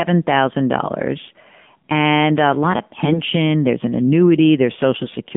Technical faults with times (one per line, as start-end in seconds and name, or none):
0.00-5.37 AMR narrowband mobile codec
3.06-3.21 AMR bit errors
5.02-5.16 AMR bit errors